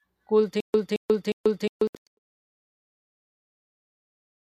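A speech clip with a stutter with silent gaps from 0.60 to 2.67 s, just before "that it". A 220 ms fragment plays six times at a steady 358 ms period, separated by 138 ms of digital silence. This is likely a stalled player or stream replaying its last buffer, so the audio meant for that stretch is lost. On a waveform it shows as identical blocks alternating with flat silent lines, and on a spectrogram as a repeated pattern cut by blank vertical bands. Overlapping this, a digital broadcast dropout between 1.87 and 2.07 s removes about 192 ms of sound as scattered holes across 240 ms, the longest lasting 96 ms, which fits a receiver muting several short failed frames. These appear as full-band blank gaps in the spectrogram and flatlined sections in the waveform. The smooth fade-out, from about 1.5 s to 2.19 s, shows as a gradual narrowing of the waveform envelope with no hard edge.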